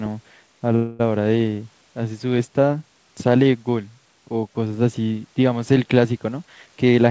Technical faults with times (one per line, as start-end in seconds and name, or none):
0.76-1.01 call audio freeze
6.42-7.07 jitter buffer speed-up